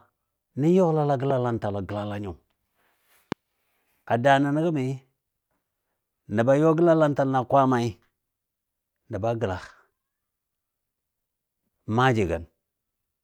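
At 1.30 to 1.33 s and again at 3.32 to 3.34 s, a loud pop cuts into the speech. Each is a single sharp click, peaking about 10 dB and then about 15 dB above the speech. A sudden electrical pulse, likely from a switch or static discharge, was added. The speech continues underneath.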